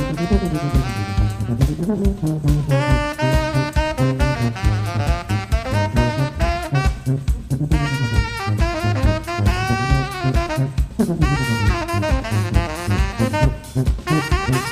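Nothing goes wrong anywhere in this audio, so there's no fault to point to at any moment.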